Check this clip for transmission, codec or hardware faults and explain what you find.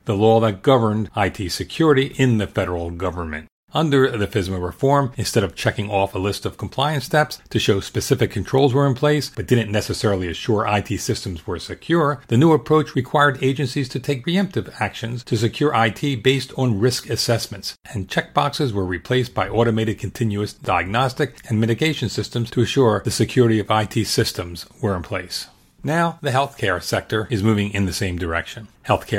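Nothing stood out as a fault on listening to the speech in this clip.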